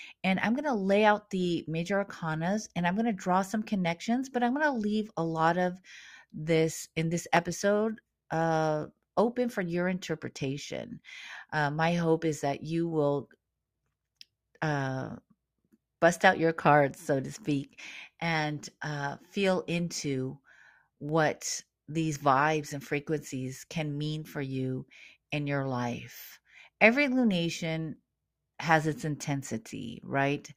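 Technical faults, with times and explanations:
7.37, 21.09 and 27.96 s: dropped samples. Three single sharp clicks, the first just after "of this in this", each a thin vertical line across the spectrum. Each is likely a fraction of a millisecond of missing samples, so the waveform jumps abruptly to a later value without audibly removing sound.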